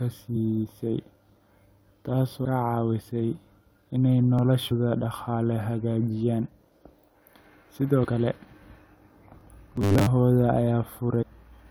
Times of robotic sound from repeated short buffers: 9.76-10.06

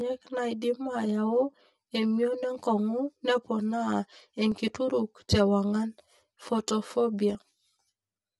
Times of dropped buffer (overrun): 4.52

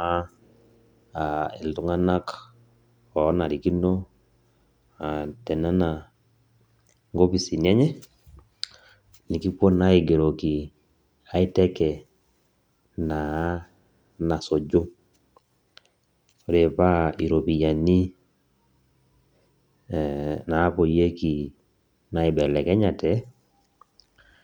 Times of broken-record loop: none

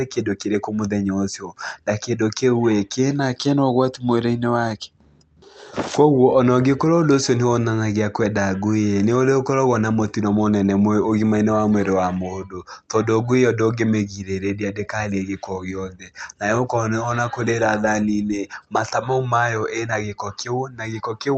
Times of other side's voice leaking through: none

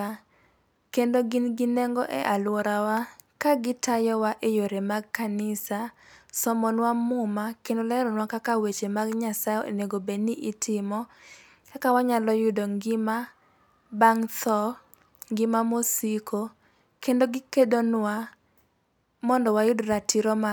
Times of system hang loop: none

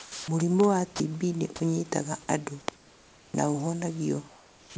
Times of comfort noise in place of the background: 0.00-0.28, 2.76-3.34, 4.30-4.76

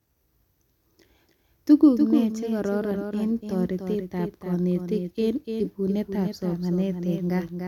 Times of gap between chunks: none

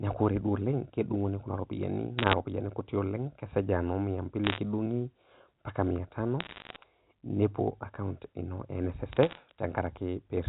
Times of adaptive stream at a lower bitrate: none

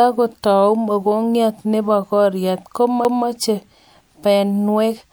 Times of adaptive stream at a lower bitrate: none

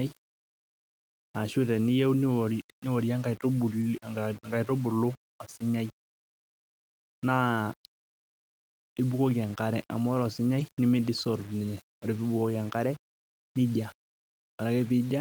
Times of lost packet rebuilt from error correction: 3.81-3.83, 10.59

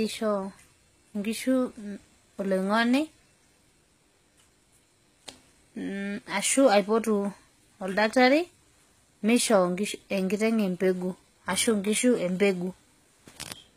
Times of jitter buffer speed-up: none

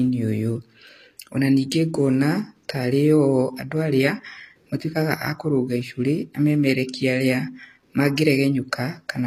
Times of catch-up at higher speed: none

